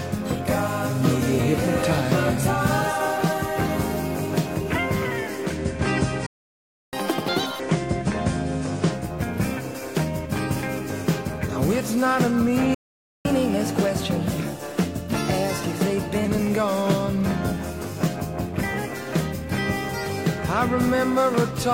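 From 5.35 s to 9.17 s the audio shows digital radio blending to analogue. A 274 ms cross-fade moves it onto the FM version of the station, where hiss sits roughly 35 dB below the signal, and the level shifts by about 1 dB. Two playback stalls cut the sound dead, from 6.26 s to 6.93 s (664 ms) and from 12.74 s to 13.25 s (505 ms), most likely because the player's buffer ran dry before more data arrived. Each stall is followed by catch-up at higher speed, as the player resamples its backlog to recover lost time. From 6.93 s to 7.59 s it runs at 2.0x, raising the pitch by about ten semitones. From 13.25 s to 16.25 s it runs at 1.1x, about a semitone and a half sharp, before settling back.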